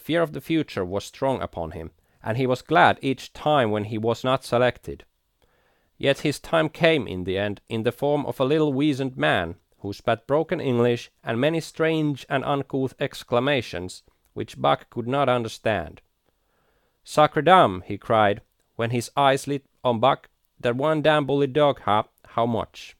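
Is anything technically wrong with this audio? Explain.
Yes. Compressed frames skipped at 4.23 s: about one frame of the compressed speech, roughly 20 ms, never reaches playback, and the frame length is 23.2 ms. The audio jumps ahead by the length of the skipped audio.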